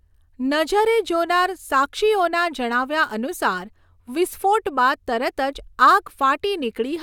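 No technical faults can be heard anywhere in the speech recording, and the signal stays steady and intact throughout.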